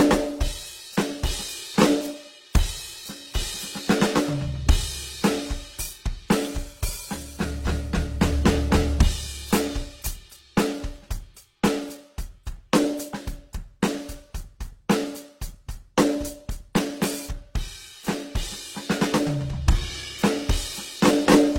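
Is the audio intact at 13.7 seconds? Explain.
No, the music was likely transcoded between lossy codecs, a low-rate Opus encode followed by an HE-AAC one. Both codecs' artefacts stack at 13.7 s, as throughout the clip, and nothing sounds above 16.3 kHz.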